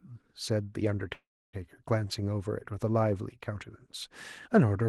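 At 1.13 s the speech hits a call audio freeze that lasts until 1.55 s. It sounds like the last bit of sound smeared into a short fading buzz, then about 290 ms of near silence, before the speech picks up right where it left off with nothing skipped. That points to packets likely getting held up in transit and the jitter buffer running dry. Everything after lands roughly 0.4 s late, all through a call path whose highs top out around 12 kHz.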